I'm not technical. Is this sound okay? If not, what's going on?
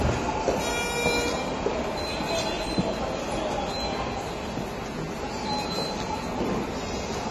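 No. Across the whole clip the sound is dull and smeared, with nothing above about 13 kHz, so the top sparkle is simply gone. The damage is plainly audible, with a warbling or fizzy texture where sounds are held or hissy. This is likely AAC compression: the file was squeezed hard to save space, so the encoder cut off the highest frequencies and coded the rest only roughly, discarding detail it judged less noticeable.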